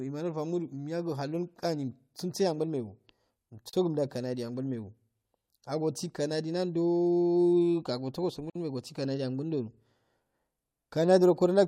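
At 3.69 s the speech drops out for about 38 ms, and again at 8.50 s for about 54 ms: a gap at a join of encoded pieces. Each stretch was encoded on its own and butted together untrimmed, so the encoder's start-up delay and last-frame padding ride along as dead air. You hear a sudden hole with smeared edges, then the speech picks up right where it left off.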